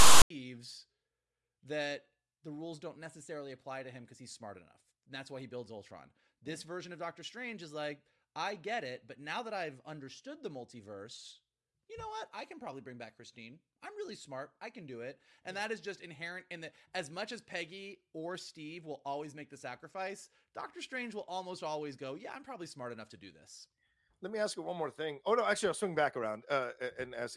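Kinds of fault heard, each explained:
File tags played as audio: the speech is preceded by a harsh, loud rasp whose waveform sits biased to one side, followed by a stretch of dead silence, the whole burst running from 0 to about 0.30 s with hard edges. A block of text metadata at the head of the file was decoded as if it were samples. The character bytes produce the lopsided buzz, and the zero padding after them plays back as silence.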